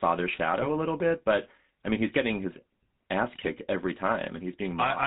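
The whole clip passes through the GSM full-rate codec, consistent with its 13 kbps coding. The speech is rebuilt from a vocal-tract model driven by sparse, evenly spaced pulses, with nothing above 4 kHz, so it sounds plainly buzzy and gravelly throughout. GSM bit errors occur from 0.61 to 0.67 s and again from 3.33 to 3.47 s. Corrupted bits reach the decoder and distort its filter, pitch or gain values, so the spectrum bends or the level jumps. The speech breaks into short squawks and gargling pops, briefly at first and longer in the second burst.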